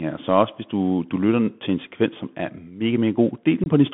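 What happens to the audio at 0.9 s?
At 0.9 s, as across the whole clip, the speech has passed through a Bluetooth CVSD headset codec, which fits a 64 kbit/s link that sends a single up-or-down bit per sample and adapts its step size. The line band runs only from about 150 Hz to 3.4 kHz, so the voice sounds thin and boxy. Fast, loud high-frequency movement outruns the step size, so sibilants come out scratchy over a granular hiss.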